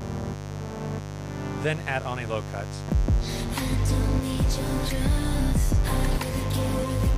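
A steady, raspy mains buzz runs throughout the audio, built on 50 Hz harmonics reaching into the kilohertz range and sitting loudly, roughly 10 dB below the signal. It comes from switching spikes twice per cycle, from a dimmer, rectifier or poor shielding.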